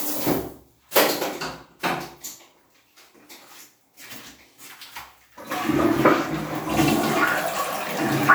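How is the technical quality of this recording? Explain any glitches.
The recording has one flaw, a pre-echo at 0.91 to 0.95 s. A transform codec spreads the quantisation noise for each block evenly across it, so when a sharp attack lands late in a block, noise sized for the loud onset also fills the quiet stretch before it. Here that smear reaches about 40 ms ahead of the attack, heard as a brief hiss leading into the transient, which then sounds softened and less crisp than it should.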